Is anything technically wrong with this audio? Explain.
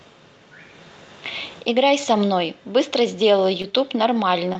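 Yes. There are two short concealed packet losses, at 3.62 to 3.65 s and at 4.53 to 4.56 s. Each time, about 20 ms of the call arrived too late for the decoder. The receiver patched the gap by extending the preceding sound, following its pitch or as shaped noise, for roughly 16 to 17 ms, then blended back into the real signal. Each gap is heard as a brief smear or wobble in the speech.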